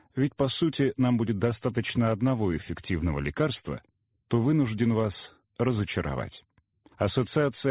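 No technical faults can be heard anywhere in the clip.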